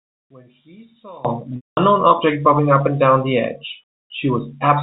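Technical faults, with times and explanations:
0.00 to 1.25 s, one channel inverted: The opening stretch is likely the result of one stereo channel carrying reversed polarity, so when the two sides are summed to mono, everything they share cancels. The centred speech collapses by about 26 dB, leaving only the small difference between channels as a faint residue. At 1.25 s the full, solid level returns.
1.56 to 1.77 s, packet loss with pitch repetition: A 210 ms gap in the incoming stream, which fits a run of about seven 30 ms packets, forced the receiver to conceal the loss by repeating the last pitch period it had. That held, slightly buzzy tone fades out over only about 50 ms, so most of the gap falls silent, and the speech then comes back through a short cross-fade. Throughout, the G.711 telephone path caps the sound below 4 kHz.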